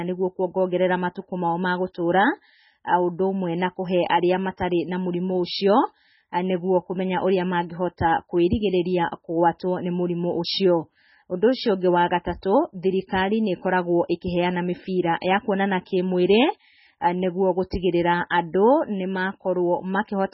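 A speech clip with heavy codec damage throughout. Nothing is heard above 5.6 kHz, so the treble stops at a hard ceiling and s sounds lose their edge. The sound is watery and swirly, with metallic chirps on sibilants. The likely cause is MP3 compression at a very low bitrate, which fits about 16 kbps. Starved of bits, the encoder drops the top band and zeroes weak frequency lines. Those lines flicker on and off from frame to frame.

At 14.21 s there is a pre-echo. A brief hiss arrives about 13 ms before a sharp attack, and the attack itself sounds softened. The codec spreads its quantisation noise across a whole block. When the onset lands late in that block, noise sized for the loud part leaks into the quiet moment just before it.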